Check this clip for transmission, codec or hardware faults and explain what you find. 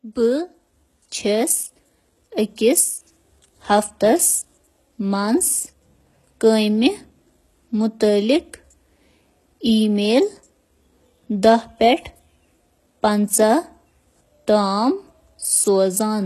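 The speech carries heavy codec damage throughout. The treble sounds synthetic. Sibilants turn gritty and lispy. Nothing is present above 12.3 kHz. This is likely HE-AAC compression at a very low bitrate, near 16 kbps. Upper bands are rebuilt from copied lower ones, so harmonics misalign above the crossover.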